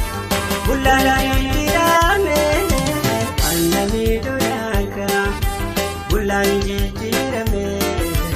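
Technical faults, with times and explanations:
0.31 to 1.97 s, doubled audio track: a second full-band copy of the sound runs about a fifth of a second behind the original and roughly 5 dB quieter. It switches in and out abruptly at those edges. Unlike an echo or reverb, it is a single repeat with no decay tail and no room colouring. The likely cause is the same signal arriving again through a slower path, or an edit that leaves two copies overlapping out of step.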